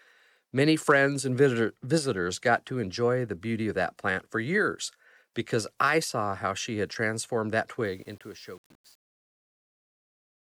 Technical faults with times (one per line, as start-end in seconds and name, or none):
7.85-10.59 truncation distortion on a fade